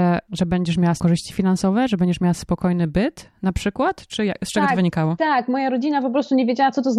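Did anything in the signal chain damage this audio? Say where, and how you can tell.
Yes. Compressed frames were skipped at 1.0 s. At that point the speech jumps forward by about a fifth of a second, which fits roughly two whole frames of 92.9 ms going missing at the codec stage, either absent from the file or rejected by the decoder as damaged.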